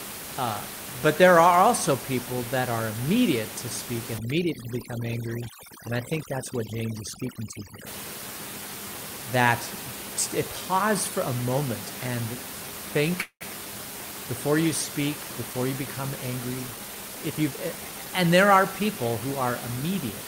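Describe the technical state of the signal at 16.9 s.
At 16.9 s you're inside a jitter buffer speed-up that runs from about 16.74 s to 18.06 s, right after "before you become angry" and ending just before "and there are people". The receiver's buffer had built up more audio than it wanted, so it kept snipping out short pitch-period-sized chunks, around a fifth of a second in total. The speech plays at roughly 114% speed with the pitch unchanged, so it comes across as noticeably rushed.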